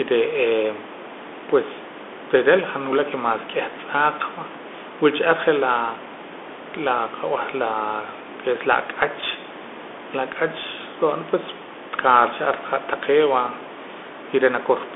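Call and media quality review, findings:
Bluetooth CVSD headset codec, whole clip: one-bit slope coding, consistent with 64 kbps, caps band at 250 Hz to 3.5 kHz, nothing past 3.8 kHz; scratchy sibilants, granular hiss, overload distortion. Room noise about 18 dB under speech.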